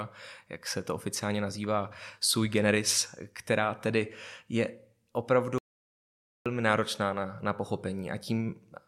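It's a speech clip with one clear playback stall: at 5.58 s the audio just drops out mid-flow and stays silent until 6.46 s, almost 0.9 s, then picks up again with "náročná na na". That's likely the player running dry or its thread getting blocked.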